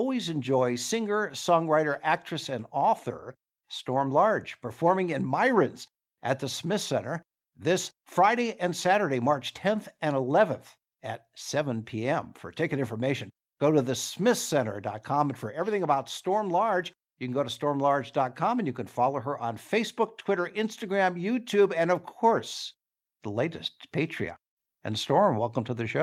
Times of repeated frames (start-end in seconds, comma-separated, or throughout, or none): none